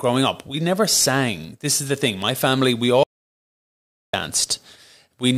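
Speech recording with an audio dropout to silence from 3.03 to 4.13 s, just after "family we". The 1.1 s gap is silent with no room tone, unlike a noise gate, and was likely caused by a momentarily lost input.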